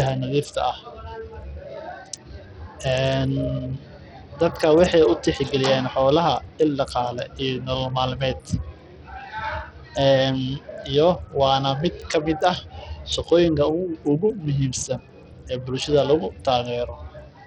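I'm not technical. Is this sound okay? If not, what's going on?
No, it isn't quite right. The speech sounds dull and gritty from start to finish, with the crisp top end fading in and out. That's very likely Bluetooth SBC compression squeezing the audio hard, throwing away the treble and roughing up the rest.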